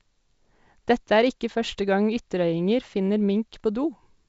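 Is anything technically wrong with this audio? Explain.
No, the speech comes through G.722 wideband telephone coding at 64 kbit/s as that path is meant to sound, its band reaching up to about 7 kHz and any trace of the coding at most faint.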